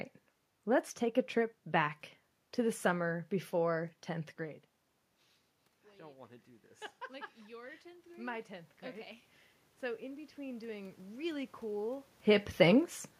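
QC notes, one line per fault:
7.07–9.11 s, automatic gain rising: after the input dropped by about 23 dB, the gain control ramped up about 5 dB, so voice and room noise swell together.
9.8–11.9 s, automatic gain rising: the gain control raised its gain by about 5 dB again over two seconds, lifting voice and background noise in one slow swell.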